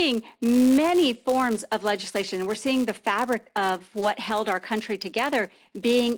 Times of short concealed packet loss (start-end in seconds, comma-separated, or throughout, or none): 3.99-4.03